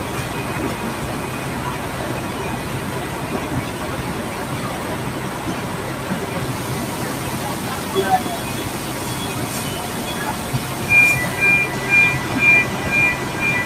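Across the whole clip the audio pumps and thins out: sharp onsets come through intact, but anything sustained, such as held tones, ambience or decaying tails, sinks by around 5 dB moments after it starts, so the level flutters and the space around the sound keeps collapsing. This is a noise suppressor applied to music or sounds. A processor tuned for speech treats steady, non-speech energy as background noise and keeps ducking it.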